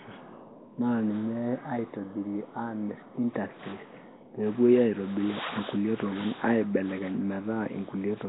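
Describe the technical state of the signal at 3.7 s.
At 3.7 s the speech carries Nellymoser compression damage, present throughout the clip. Nothing survives above 3.9 kHz. Weak bands seem starved of bits and filled with noise, likely from the Nellymoser Asao codec at a low rate near 16 kbps. The result is rough, hissy and underwater-sounding.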